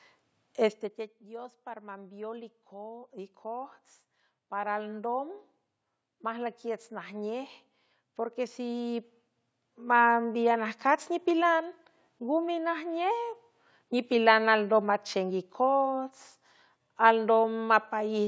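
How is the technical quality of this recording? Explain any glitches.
There's one real glitch here, an automatic gain rise. From 1.27 s to 11.12 s the automatic gain control decides the input is too quiet and keeps turning itself up, by about 15 dB in total. Voice and background swell together, slowly, so it feels like the room creeps closer rather than anyone speaking louder. The top end stops around 8 kHz throughout, which fits a call's microphone processing.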